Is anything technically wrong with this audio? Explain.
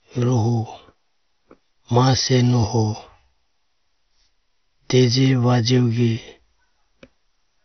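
Yes. MP2 compression, throughout: the speech is likely squeezed by an MPEG Layer II coder at a rate that fits about 48 kbps, switching off sub-bands above 6.2 kHz, leaving it dull with gurgling, granular distortion.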